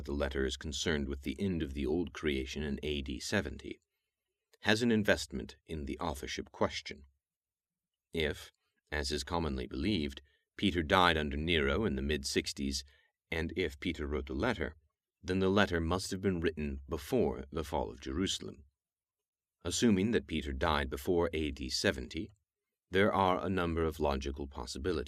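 No technical faults can be heard anywhere in the speech recording; the signal stays steady and intact throughout.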